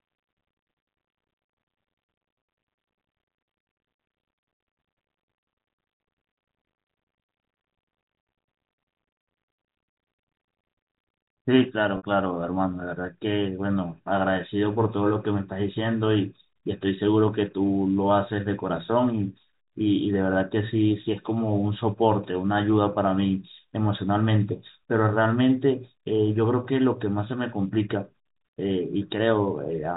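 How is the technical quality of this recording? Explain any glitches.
The recording has one audible glitch, a brief packet loss with pitch repetition in the speech; the G.711 telephone coding is audible as a band limit at 4 kHz.

From 11.97 to 12.03 s, about 60 ms of audio is missing, consistent with two lost packets. The receiver fills the gap by repeating the last pitch period, which sounds like a held buzz that fades toward silence and then cross-fades back into speech. A plain dropout would leave a hard silence or a click instead.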